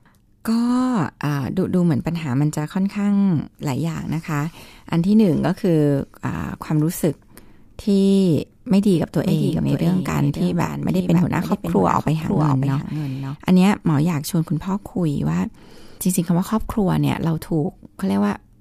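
At 8.94 s a doubled audio track begins. A second copy of the speech enters abruptly, trailing the original by about half a second. It sits roughly 5 dB below the main signal. The copy is full-band and dry, with no reverb or tonal change. Each syllable returns as a distinct late repeat. The likely cause is the same signal being captured again through a slower path. The copy drops out just as suddenly at 13.36 s.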